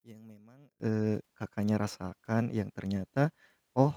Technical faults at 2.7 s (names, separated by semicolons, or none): none